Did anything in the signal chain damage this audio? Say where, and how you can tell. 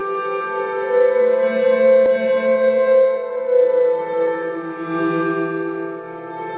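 Yes. The sound is hollow and phasey from start to finish, with a fixed notch around 100 Hz and further notches above it. This is channel delay (comb filtering) at the mono downmix: one channel arrives roughly 5 ms late, and summing cancels their shared content.

At 2.06 to 2.08 s, playback jumps forward with no gap or fill, and about a second of audio simply vanishes. This is a skip ahead at the network or jitter buffer stage: a stretch of audio was discarded while later packets were already queued.

From 2.16 to 3.46 s, the audio runs hurried at unchanged pitch, about 113% speed. This is a jitter buffer speed-up: to shrink excess delay, the receiver trimmed short pitch-period pieces repeatedly, removing roughly 150 ms in total across the stretch.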